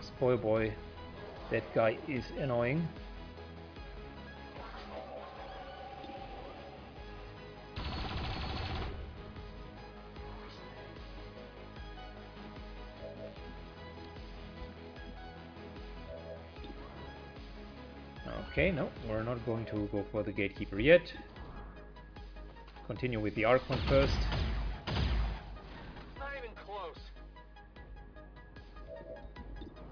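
No technical faults can be heard anywhere in the recording.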